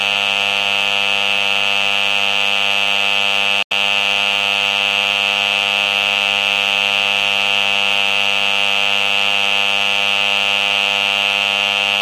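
At 3.63 s the audio cuts out for about 85 ms and returns at 3.72 s, picking up as though it had kept playing. This is likely a Bluetooth dropout: packets missed their deadline to the headphones and were discarded, consistent with roughly four lost frames.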